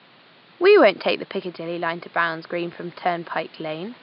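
No technical faults are audible.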